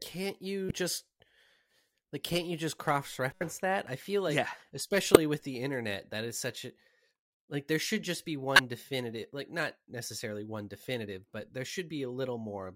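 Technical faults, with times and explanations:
0.66–0.72, 3.32–3.41, 5.14–5.17 and 8.56–8.60 s, corrupt frame decoded: bit errors in two or three compressed frames were decoded anyway, throwing energy to wrong frequencies as brief chirps, squeaks, blips or bursts of noise, about −20 dBFS early, about −5 dBFS later.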